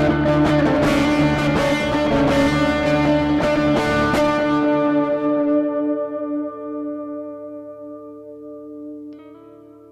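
This is a music clip, and there's nothing technically wrong to be heard anywhere in it.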